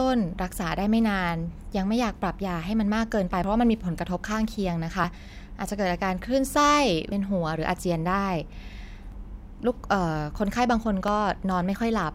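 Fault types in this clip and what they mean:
Dropped buffer (overrun): at 3.44, 5.04, 7.12, 9.12 and 11.08 s the speech jumps abruptly forward, with no gap of silence. Each time a stretch of sound has gone missing, roughly 40 ms at most points and nearer 70 ms at 7.12 s, and the audio on either side is butted together. This is likely an overrun, where incoming samples were overwritten before the program read them, so whole buffers vanished.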